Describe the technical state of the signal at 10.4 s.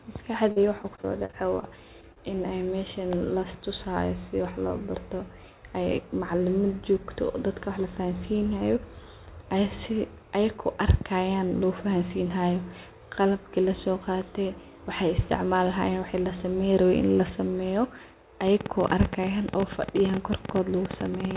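At 10.4 s the signal is intact, with no fault present, only the narrowband character of the G.711 mu-law call path, which leaves nothing above 4 kHz.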